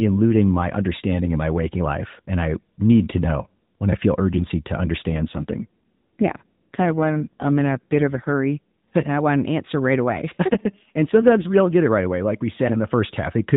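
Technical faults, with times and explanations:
5.10–8.32 s and 10.48–11.49 s, AMR rate drop. With no gap and no change in bandwidth, the speech turns rougher and more synthetic. This fits a fall from 12.2 to 5.9 kbps.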